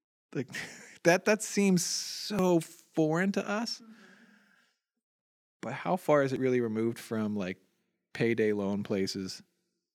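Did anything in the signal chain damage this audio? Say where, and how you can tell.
Yes. There is audio missing between chunks at 2.39 s, between "that that seems" and "foreign to us", and again at 6.36 s, between "how far is" and "really removed from like". Each time roughly 30 ms of speech drops out and the two sides butt together with no gap. The skips fall about 4 s apart, which points to the driver or buffer stage, likely a recorder handling 4 s chunks and losing a sliver at each handover. On a waveform the splice shows as an abrupt jump in the cycle shape, and on a spectrogram the harmonic tracks shift suddenly at a single time column.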